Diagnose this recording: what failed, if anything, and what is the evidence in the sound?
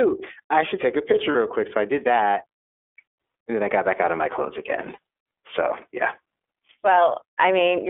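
At the codec stage, the iLBC codec limits the speech to a 300 Hz to 3.5 kHz telephone band and makes it plainly rough and synthetic. That roughness, rather than plain muffling, points to a frame-based vocoder such as the 30 ms, 13.33 kbps mode.

At the network stage, lost iLBC frames at 1.32 s and 4.94 s each leave a roughly 30 ms buzzy held vowel instead of silence. This is decoder concealment, not a dropout, and the speech recovers immediately afterwards.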